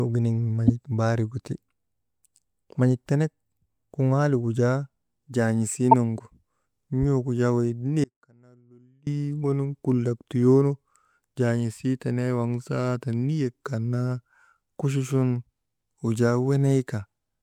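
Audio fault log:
0.67–0.70 s and 5.91–5.94 s, corrupt frame decoded: brief glitches of misplaced energy break into the speech, the first spanning what sounds like two frames and the second about one. Damaged bits gave the decoder wrong gains or codes, and it played those frames anyway.
8.04–9.07 s, audio dropout to a faint residue: right after "jaa wey" the speech cuts out abruptly for about 1.03 s, leaving only a faint trace about 30 dB below normal level. The likely cause is a lost signal while the downstream path stayed live.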